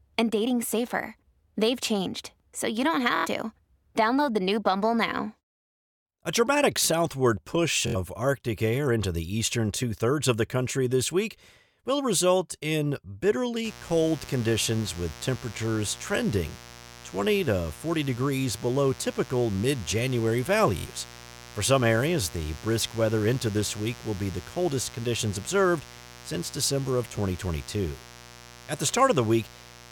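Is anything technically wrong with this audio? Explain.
Yes, there are two kinds of fault.

Bluetooth stutter occurs three times: 3.16 to 3.26 s, just after "changed so you don't"; 7.87 to 7.96 s, after "dramatic southward push"; and 20.78 to 20.87 s. Each time, packets failed to arrive in time, so the receiver kept replaying its last short buffer. The result is a brief machine-gun buzz. About 93 ms of audio is lost in the first gap and about 70 ms in each of the others, and the speech resumes further along.

Mains buzz starts at 13.65 s and runs to the end. Switching spikes from the 60 Hz supply leaked into the signal path and added a dense series of harmonics. The result is a steady, raspy buzz sitting roughly 20 dB below the speech.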